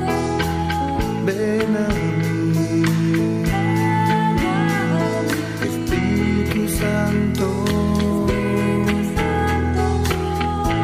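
No faults present; nothing to report.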